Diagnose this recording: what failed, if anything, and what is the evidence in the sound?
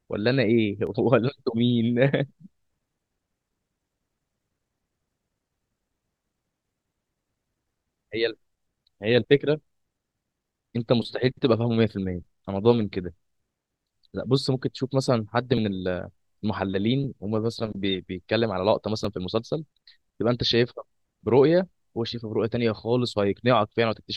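Slight forward skips with no silence occur at 0.87, 15.57 and 19.05 s. This is likely a dropped buffer (overrun) at the driver or buffer stage: a few milliseconds, roughly 10 ms at 15.57 s, were overwritten unread and the remaining audio joined directly.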